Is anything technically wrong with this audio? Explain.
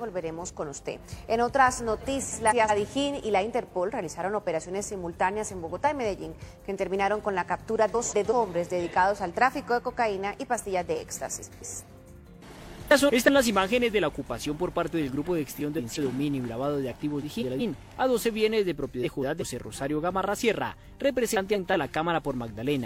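Yes, there's frames out of order at 2.29–2.71, 7.94–8.33, 11.42–11.82, 12.88–13.30, 15.56–15.99, 17.22–17.61, 19.03–19.43 and 21.36–21.74 s. In each one, two adjacent chunks of about 186 ms (which fits four-frame blocks) got decoded swapped, so you hear a brief garbled flutter, and no time goes missing.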